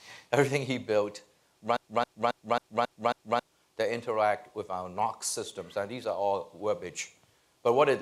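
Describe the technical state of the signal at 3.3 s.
A broken-record loop runs from 1.77 to 3.43 s, so 3.3 s sits near its end. A 271 ms fragment repeats exactly, back to back, six times. This is likely a stalled player or stream resending its last fragment, and the audio for that span is lost.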